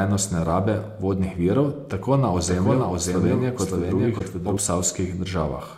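A corrupt frame decoded at 0.48 to 0.51 s, just before "vodnih virov", is a short error peaking around -20 dBFS. Flipped bits in what sounds like about two compressed frames were played anyway, so misread codes scattered energy into the wrong frequencies.

A doubled audio track runs from 2.37 to 4.57 s. A full-band copy, roughly 5 dB quieter, trails the original by about half a second with no decay or room colour, and it begins and ends abruptly, likely a second capture through a slower path.

Another corrupt frame decoded at 4.16 to 4.22 s, inside the doubled section, is a louder error peaking near -15 dBFS. Its length suggests around four damaged frames, with misplaced spectral energy.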